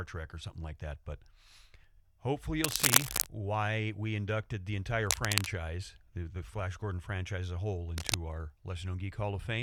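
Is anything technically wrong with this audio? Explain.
Yes. Cable scratch noise appears three times: 2.63 to 3.26 s, just before "why we inducted the", at roughly 5 dB above the speech; 5.07 to 5.47 s, after "why we inducted the"; and 7.98 to 8.14 s, after "franchise as a whole", both at about speech level. Each is a dense, uneven scratching burst over the speech, likely from a worn cable or connector whose contact resistance fluctuated as it moved.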